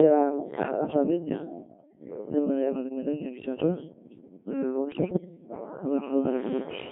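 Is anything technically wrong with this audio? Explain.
Yes, there are two faults. Throughout, the speech passes through a Codec 2 vocoder. Its heavy robotic buzz fits roughly 1.6 kbit/s. Only pitch, voicing, energy and a spectral envelope survive, and the decoder rebuilds the speech from sine waves limited to 150 Hz to 3.5 kHz. A spectrogram shows neat, smeared harmonic stacks with nothing above 3.5 kHz.

Bit errors on digital voice radio strike at 3.20 to 3.46 s and 4.92 to 5.29 s, at around 4 and 7 percent of bits. Corrupted frame parameters make the voice jump in pitch, level and tone, breaking into warbling bleeps. They appear as abrupt harmonic and envelope discontinuities.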